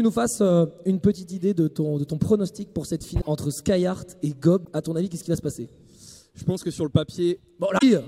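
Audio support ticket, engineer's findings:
Three short glitches with a skip forward in the audio: 3.20–3.27 s, 4.64–4.68 s, 7.77–7.83 s. Each lasts about one to three frames at roughly 26 ms per frame. Likely cause: broken MP3 bit reservoir after frames dropped. The next frame looks back into the reservoir, reads bytes from the wrong frame, and decodes garbage until the reservoir refills.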